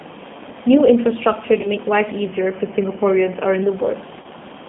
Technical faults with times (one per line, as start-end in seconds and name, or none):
0.00-4.69 G.729 codec
1.61-1.68 VoIP packet loss concealed by the speech codec
4.22-4.26 VoIP packet loss concealed by the speech codec